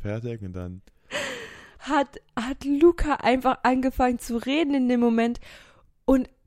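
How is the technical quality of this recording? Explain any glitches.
One fault stands out, a single loud pop at 4.43 s, between "einfach angefangen zu" and "in dem". A sudden voltage pulse, likely from a switch, static or a driver glitch, enters the signal and produces one sharp pop a few decibels above the speech, which continues underneath.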